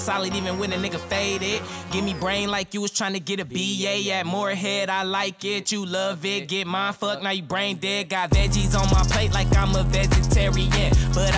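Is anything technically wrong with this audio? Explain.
Yes. From 7.7 s to the end, the audio shows a resampler restarted on every block. The 48 kHz to 16 kHz conversion was run on each 10 ms block separately, so the filter lacked real neighbouring samples at every block edge and left a small error there. At 100 edges per second these merge into a 100 Hz buzz. Unlike mains hum, the buzz stops whenever the signal does, and unlike dropout clicks, it is perfectly regular.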